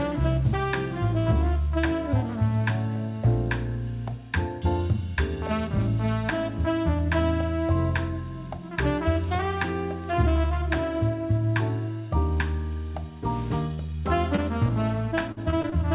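Three short concealed packet losses come first, at 13.74 to 13.80 s, 13.86 to 13.90 s and 14.36 to 14.40 s. Audio failed to arrive in time, and the receiver extended the preceding sound to bridge each hole. The first hole is 40 ms long and the other two are about 20 ms each. Each one sounds like a brief smear or wobble.

Repeated packet loss follows from 15.32 to 15.74 s. There are four gaps in this stretch, and the longest is 47 ms. Concealment fills about a quarter of the span, so the sound turns choppy, with fragments missing.

Throughout the clip, nothing is heard above 4 kHz, which fits a G.711 mu-law call path at 64 kbps.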